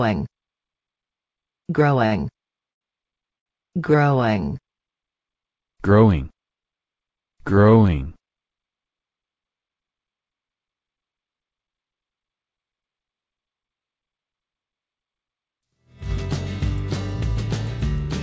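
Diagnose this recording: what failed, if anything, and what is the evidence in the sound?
Network and jitter-buffer stage: three short stalls from late packets, at 2.06 to 2.14 s, 2.71 to 2.84 s and 3.38 to 3.49 s. Each time the buffer ran dry, the receiver stretched the last sound for 55, 96 and 79 ms, then resumed where it left off, so nothing is lost but the timing drifts later at each hold. The held stretches sound drawn out, against a band that stops at 8 kHz, consistent with wideband G.722.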